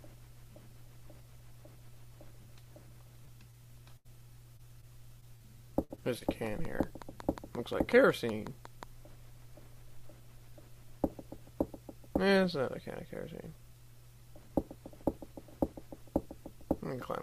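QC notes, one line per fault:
3.25–6.23 s, repeated packet loss (robotic sound): ten dropouts, the longest 78 ms, about 320 ms missing in all. Each hole is bridged by stretching the preceding sound, so this stretch turns choppy, with fragments gone between the patched gaps.
6.46–8.84 s, train of clicks: roughly fifteen evenly spaced pops at 5.5 per second, peaking about level with the surrounding sound. Their matching shape and steady pace point to a likely cause in electrical interference or a faulty connection injecting pulses.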